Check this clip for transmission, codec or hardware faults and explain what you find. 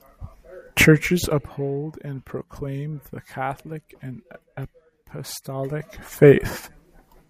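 No transmission, codec or hardware faults turn up in this speech clip.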